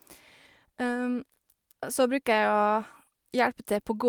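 No technical faults can be heard anywhere in the recorded speech, and the signal stays continuous and stable throughout.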